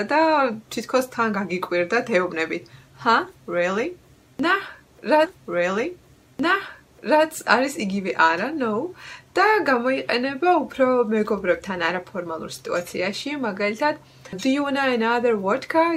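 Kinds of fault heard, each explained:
Stream segment repeated: the player queued the same chunk twice, so about 2 s of audio replays around 5.25 to 7.25 s, with a small blip at the jump back.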